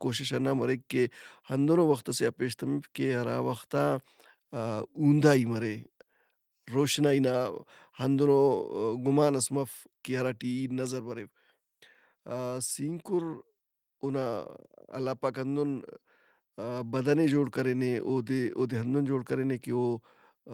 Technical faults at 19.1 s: none

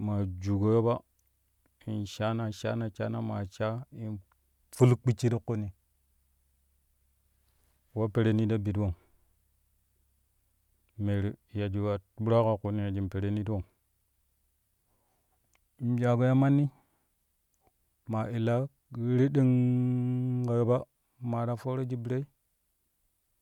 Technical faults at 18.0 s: none

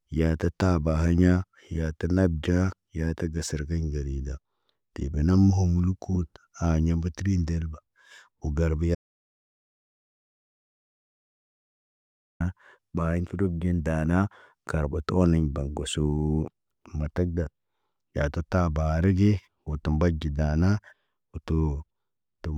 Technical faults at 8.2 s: none

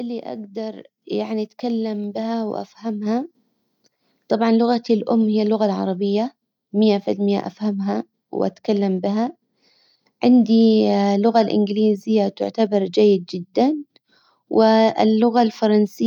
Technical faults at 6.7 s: none

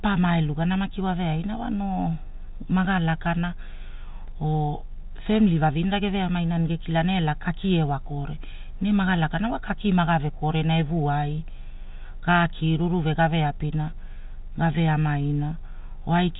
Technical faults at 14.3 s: none

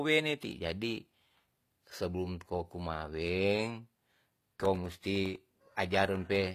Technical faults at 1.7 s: HE-AAC compression

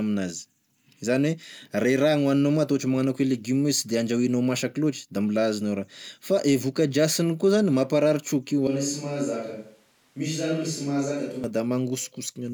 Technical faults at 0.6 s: none

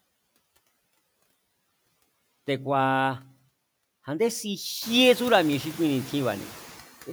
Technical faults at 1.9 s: noise suppressor artifacts

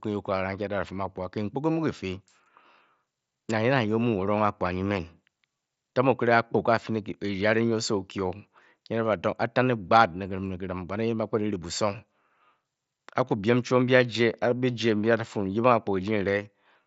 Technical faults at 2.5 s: concealed Bluetooth headset packet loss

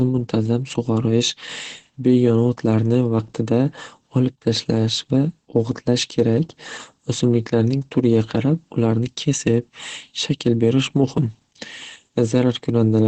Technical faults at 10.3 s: Opus compression

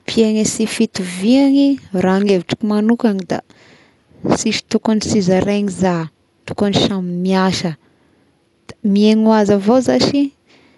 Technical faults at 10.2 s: Dolby Digital compression

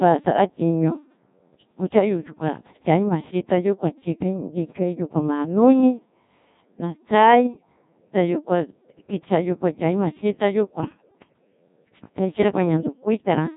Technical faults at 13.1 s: Codec 2 vocoder

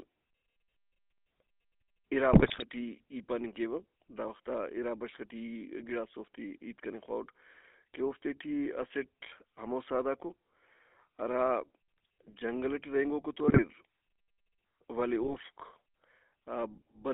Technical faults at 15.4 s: GSM full-rate codec; GSM bit errors

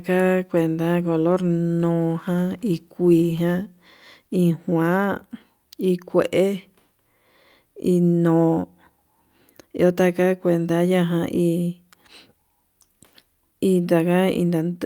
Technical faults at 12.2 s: none

